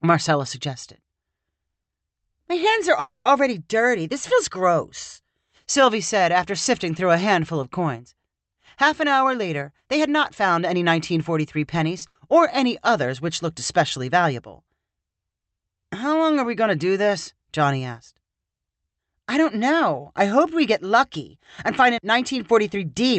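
It's a speech clip that's been through an Opus call path, so nothing above about 8 kHz, and it has a handful of network-side problems. First, right after "hands are" there's a call audio freeze from 2.99 to 3.32 s: the last sound gets carried on as a buzzy tail for roughly 260 ms, dropping to silence for about 40 ms, and then the speech picks up exactly where it left off, so nothing is lost but everything after runs about 260 ms later. The likely cause is packets held up in transit until the jitter buffer ran dry. Then from 8.53 to 11.91 s there's a jitter buffer speed-up, with the speech running at about 105% speed at unchanged pitch. The receiver is trimming tiny pitch-period-sized slices over and over, around a fifth of a second in total, to work off a backlog of queued audio, and it comes across as slightly rushed. A second speed-up runs from 17.89 to 18.71 s, just before "I don't know I", this time at about 107% with roughly 70 ms cut. 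Right after the first one there's a short stall from a late packet at 11.98 to 12.03 s: a packet wasn't there on time, so the receiver stretched the current sound by 30 ms until it showed up, giving a brief held moment with nothing missing. Straight after that comes a burst of packet loss from 12.07 to 12.17 s, just before "or any others which". Here the packets never made it in time, so about 80 ms of speech is replaced by a fading continuation of the previous sound, and the audio resumes further on with that stretch gone.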